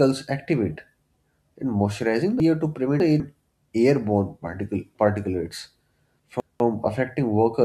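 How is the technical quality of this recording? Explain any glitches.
The recording has two ordering glitches. Chunks out of order occur from 2.4 to 3.2 s and from 6.2 to 6.6 s. Playback is built from 200 ms blocks, and in each span one block arrived late and slots in after blocks meant to follow it, three blocks late in the first span and one in the second. Nothing is missing, but the speech jumps back on itself, giving a brief jumbled stretch with hard joins.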